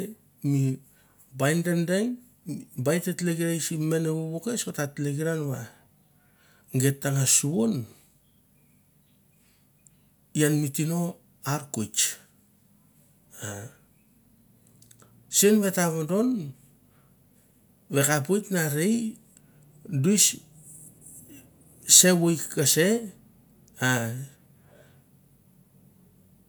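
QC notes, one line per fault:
No technical faults are audible anywhere in the speech recording.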